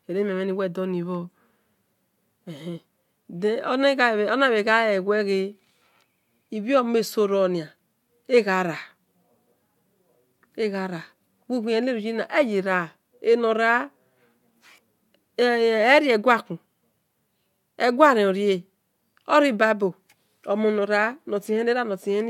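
Nothing in this speech recording points to a technical fault at any point in the signal.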